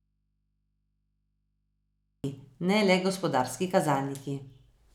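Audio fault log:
0.0–2.24 s, audio dropout to a faint residue: the signal path is likely cut upstream while the input stays live, so the speech is already missing at the start and only mains hum remains, roughly 50 dB down, until the speech snaps back abruptly at "ne le gospodarski".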